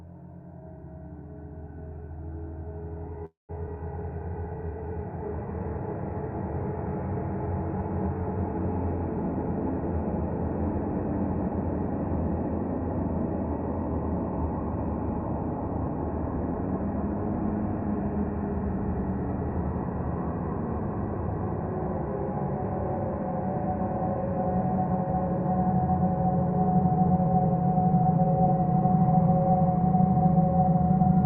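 At 3.25 s there's a call audio freeze. The last sound smears into a fading buzz, then about 160 ms of silence, and it picks up at 3.52 s with nothing lost, just running 235 ms late. Likely packets stalled and the jitter buffer ran dry.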